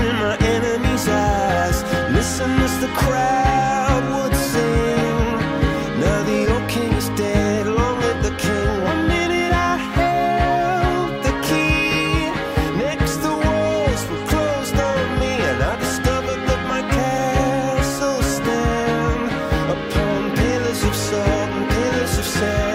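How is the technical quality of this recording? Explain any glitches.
No glitches can be heard anywhere in the recording, and the signal stays technically sound throughout.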